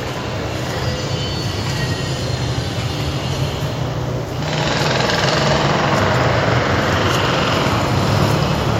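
No technical faults are audible.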